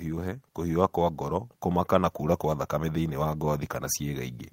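A speech recording with nothing technically wrong with it.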